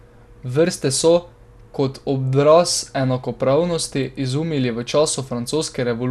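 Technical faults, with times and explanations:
Throughout, MP2 compression: the speech was likely squeezed through MPEG Layer II at a low rate, around 80 kbps, starving the upper sub-bands of bits so nothing survives above about 12.2 kHz, leaving a dull top and a gurgling, granular grain on the remaining bands.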